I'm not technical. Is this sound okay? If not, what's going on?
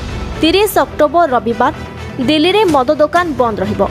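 No. The recording level was likely set far too high, so an automatic level control keeps yanking the volume down on every loud sound. That causes gain pumping throughout: loud and soft parts end up closer in level, and everything sounds squashed.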